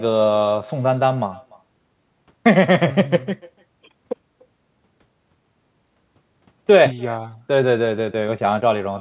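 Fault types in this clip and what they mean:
Echo with no canceller: the far end's loudspeaker output is being picked up by its microphone and sent back without any echo cancellation, so every phrase of speech returns as a faint, thin copy around 300 ms later. The returning copy sits about 25 dB below the direct speech. It is band-limited like the rest of the audio, which stops at 4 kHz, consistent with a narrowband G.711-type call codec.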